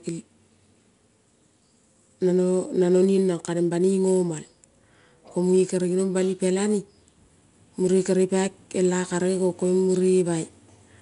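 Right from the start and all the way through, this speech has 4-bit ADPCM compression damage: each sample is coded as a coarse step off a prediction, so a gritty hiss rides every loud syllable, attacks sound roughened, and nothing above 10.6 kHz survives, which points to a bitrate near 89 kbps.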